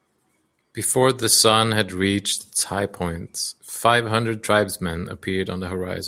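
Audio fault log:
No technical fault is audible anywhere in the speech signal, which stays continuous and intact from its first moment to its last.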